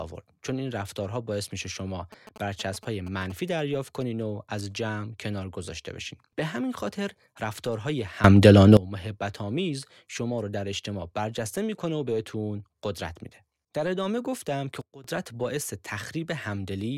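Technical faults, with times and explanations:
2.12–3.32 s, GSM signalling bursts: A nearby 2G phone was signalling rather than carrying a call, sending short groups of radio bursts that the audio circuit rectified into the signal. Each burst group comes through as a galloping dit-dit-dit of short buzzes at the 217 Hz frame rate, sitting roughly 15 dB below the speech.
8.24–8.77 s and 14.81–15.04 s, sudden gain jumps: The digital gain was likely switched from one sample to the next with no ramp, as when a setting or bit shift is applied abruptly. In the first span, speech and background noise leap up together by about 18 dB, and in the second they drop together by about 16 dB. Each change snaps in instantly, and the noise floor moves with the speech.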